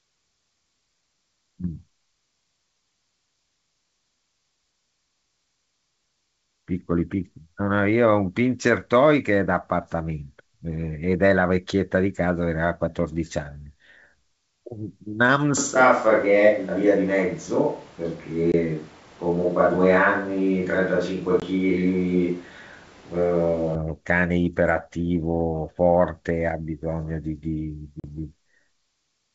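From 15.6 to 23.8 s the sound turns roomy and hollow, with thinner bass but at much the same level. It likely comes from a switch to a distant microphone. On a spectrogram the low end fades and a steady noise floor, roughly 30 dB below the speech, fills the gaps between phrases.

Within that stretch, packet loss on an ADPCM call cuts a 20 ms silent hole at 18.52 s and another at 21.40 s, each pointing to one lost packet. The waveform drops to silence with hard edges. When the sound resumes, the decoder's predictor and step size are out of step with the sender's, so the speech comes back slightly distorted before settling.

At 28.00 s a 40 ms gap, fitting two lost packets, gives a wider blank column on the spectrogram, followed by the same distorted recovery. The G.722 wideband coding keeps content up to 7 kHz on either side of each gap.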